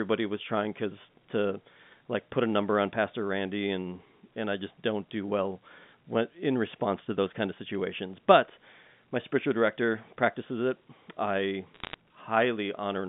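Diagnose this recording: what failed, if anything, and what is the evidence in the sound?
The failure is on the transmission side: bit errors on a digital phone line, in a short burst from 11.74 to 11.94 s near the end of the clip. For about 0.2 s you get a cluster of sharp ticks and crackle laid over speech that is unchanged underneath. Each flipped bit corrupts a single G.711 A-law sample. When the hit lands on a high-order bit, or on the sign of a loud sample, that sample jumps far off the waveform and clicks. The error rate there is a fraction of a percent. Outside that burst the narrowband telephone channel, roughly 150 Hz to 3.6 kHz, shows no faults.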